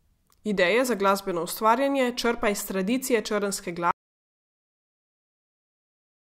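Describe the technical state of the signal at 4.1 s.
At 4.1 s the signal is dead silent: an audio dropout to silence that starts at 3.91 s and runs right to the end. The speech cuts off mid-flow with no room tone left, so the input was likely lost while the recorder kept writing zeros.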